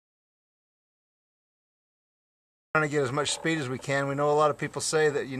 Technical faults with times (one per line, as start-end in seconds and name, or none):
0.00-2.75 audio dropout to silence